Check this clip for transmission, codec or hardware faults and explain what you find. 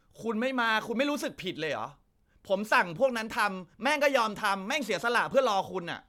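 Nothing in this recording points to a fault. The speech carries on with no audible disturbance at any point.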